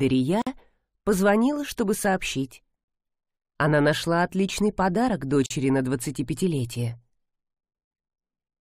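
At 0.42 s (about 50 ms) and 5.46 s (about 44 ms), gaps at the join of encoded pieces: separately encoded segments keep their padding silence, showing as blank vertical strips with smeared edges in the spectrogram, flat-line dropouts in the waveform.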